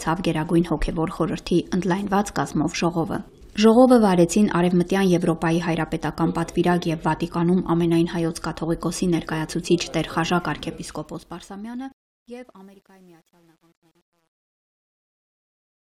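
From 10.53 s the fade-out turns grainy, and from 11.83 s to the end at 15.81 s it is at its grittiest. This is truncation distortion on a fade: an undithered gain stage, fitting roughly 10 bits, reduces the decaying waveform to coarse square steps.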